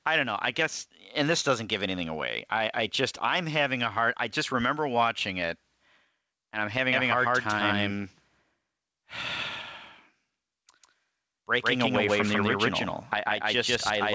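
Gain pumping runs through the whole recording, with the level swinging by around 10 dB. The likely cause is input gain set far too high, with a fast limiter clamping down on each peak and squashing the speech.

A doubled audio track starts abruptly at 6.93 s and lasts to the end. A second, equally loud copy of the speech trails the first by about 150 ms, dry and full-band with no room colour. This is likely from the same signal being captured again through a slower path. Above both faults, the speech has nothing above 8 kHz, which fits a G.722 call codec.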